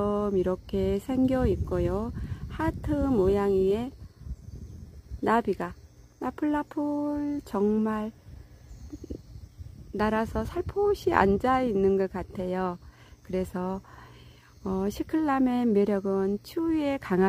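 From 1.25 to 5.27 s the audio carries a gritty, inharmonic fizz from crude rate conversion. Samples were dropped without filtering, which fits a 48 kHz to 44.1 kHz change, leaving error roughly 35 dB down. A spectrogram shows faint stray lines unrelated to the harmonics.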